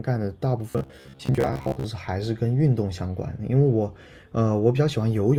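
Robotic sound from repeated short buffers runs from 0.70 to 1.84 s: the speech hardens into a rigid metallic buzz at 66.8 Hz that loosely follows the words. Likely cause: starved input, with chunks of about 15 ms looped, repeating roughly half the audio.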